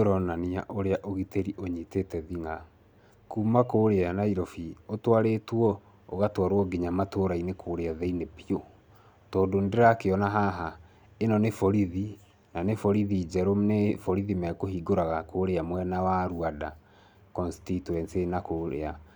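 Listening through the speech recording, nothing stood out as a technical fault at any point.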